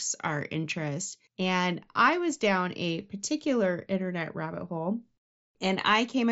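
Nothing in this speech recording stood out as a fault on listening; it comes through the Bluetooth mSBC headset path with its band topping out near 7.7 kHz, as that link normally does.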